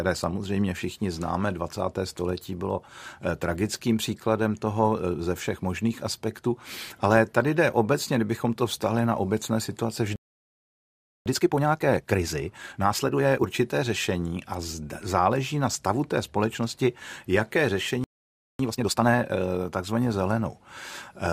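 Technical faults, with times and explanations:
10.16–11.26 s, playback stall: the speech cuts to silence for about 1.1 s, likely because the player ran out of buffered data; the waveform shows a flat gap.
11.26–13.44 s, time-compressed catch-up: speech is hurried at 1.5 times normal speed but keeps its pitch; the spectrogram shows squeezed syllables and unchanged harmonic spacing.
18.04–18.59 s, playback stall: a shorter dropout of about 0.55 s, likely from the playback thread being blocked, appears as a blank column in the spectrogram.
18.59–19.13 s, time-compressed catch-up: a brief burst at double speed at normal pitch while the backlog is trimmed; the waveform envelopes crowd together with small splice seams.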